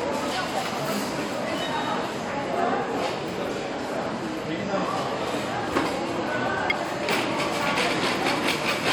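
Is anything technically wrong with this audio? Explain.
Yes. Two brief glitches break through the audio, one at 3.5 s and another from 6.70 to 6.72 s. Both are damaged data in a compressed stream: corrupted bytes make the decoder misread frames and lose sync until it finds a valid frame header again.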